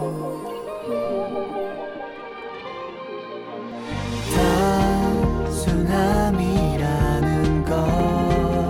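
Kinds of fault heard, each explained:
Dropped buffer (overrun): three brief skips where the sound jumps ahead with no gap, likely samples overwritten before being read, each losing roughly 10–20 ms.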